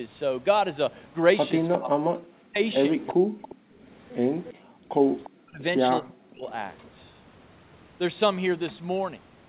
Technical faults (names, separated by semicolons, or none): speech suppressed in double talk; echo leak; background gated by the echo canceller